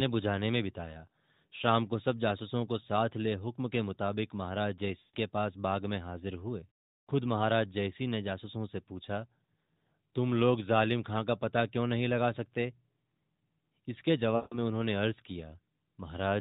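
Speech over the AMR narrowband mobile codec, band-limited at 4 kHz, is hit by lost AMR speech frames at 5.00–5.16 s and 14.36–14.58 s. The decoder stretches the last good frame with falling gain, so each spot smears then fades; a spectrogram shows frozen harmonics thinning out, and the waveform tapers to near silence.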